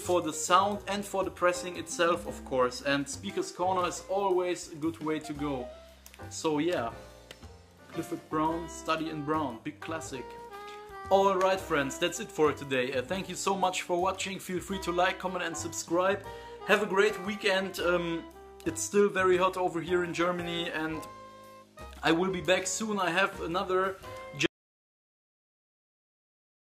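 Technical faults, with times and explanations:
24.46 s to the end: audio dropout to silence. The sound cuts off mid-flow at 24.46 s and the last 2.2 s or so are silent, with no room tone, hiss or decay tail, and it never comes back. That flat, dead silence points to the input going away rather than the source stopping. Most likely a device dropped out, a link failed or something got muted while the recorder kept writing, so whatever happened in those final seconds is lost.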